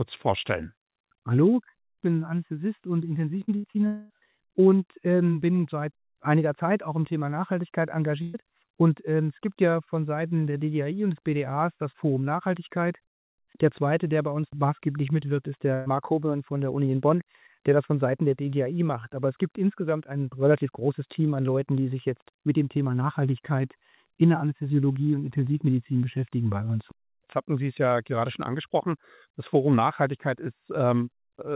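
Short concealed packet loss at 3.44 s: about 40 ms of audio never arrived, and the receiver extended the preceding sound to bridge it, leaving a brief smear.

Burst of packet loss at 3.56 to 3.67 s: roughly 80 ms went missing in a row. The held-over sound fades as a buzz or hiss before playback resumes further along.

Short concealed packet loss again at 3.72 s: another 40 ms hole patched by continuing the last sound, heard as a quick wobble.

Long network dropout, likely the cause, at 3.87 to 4.13 s: about 0.24 s is lost. It is filled throughout by a stretched, decaying continuation of the prior sound, with no outright silence, and the audio then jumps ahead.

Burst of packet loss at 8.22 to 8.37 s and at 15.74 to 15.89 s: each drops 120 ms. The gap is covered by a fading held buzz or hiss, and the intervening material is skipped. Across the clip, the G.711 call path leaves nothing above 4 kHz.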